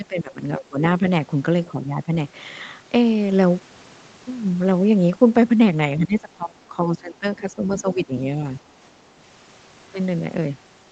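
A speech recording in which the talker is repeatedly pushed down, likely speech suppressed in double talk by an echo canceller reacting to the far side: at 0 to 0.42 s, 0.58 to 0.82 s, 1.65 to 2.11 s and, longest, 5.97 to 8.13 s. The level sinks by roughly 10 to 20 dB. On a waveform these show as pinched, uneven stretches, and on a spectrogram as faded, patchy bands within otherwise continuous harmonics.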